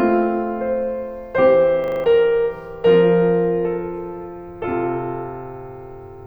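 At 1.84 s the music freezes into a system hang loop that lasts until 2.04 s. The playback side stopped delivering new audio while the output hardware kept replaying its ring buffer, so one 40 ms slice of music repeats exactly five times. At a 25 Hz loop rate this comes across as a rapid, rattling stutter rather than a smooth buzz, and about a fifth of a second of the music is missing where it resumes.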